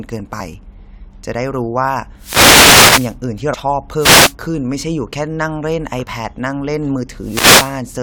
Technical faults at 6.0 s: damaged data in a compressed stream

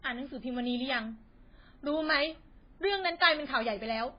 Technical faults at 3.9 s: MP3 compression; bit error spike

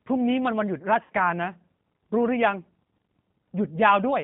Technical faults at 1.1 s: G.729 codec; VoIP packet loss concealed by the speech codec

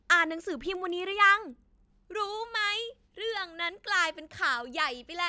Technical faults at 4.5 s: resampler restarted on every block

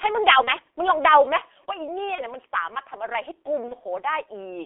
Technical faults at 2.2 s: G.723.1 codec; VoIP packet loss concealed by the speech codec

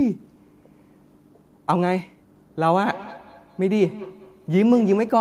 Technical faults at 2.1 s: none

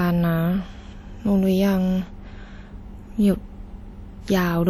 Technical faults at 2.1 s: WMA compression

